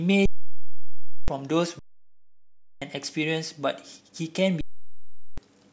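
At 0.26 s the speech just freezes: an underrun with held sample. The output buffer ran dry and the converter sat on its last value, so the waveform goes flat and silent until 1.28 s, then it comes back, with about a second of audio lost in between. It happens again from 1.79 to 2.82 s, and from 4.61 to 5.38 s, losing roughly 0.7 s. Those 1.02 s gaps fit a 16,384-sample stall.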